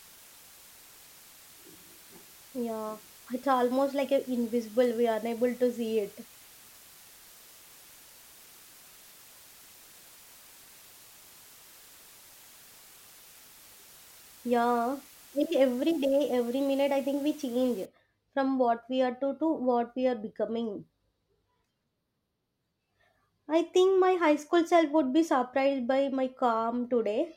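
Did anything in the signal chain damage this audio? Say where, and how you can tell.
Yes, sample-format conversion: from 0.0 to 17.85 s it's low bit depth with dither, 7 bits, giving a steady, even hiss fairly close under the speech, with no distortion.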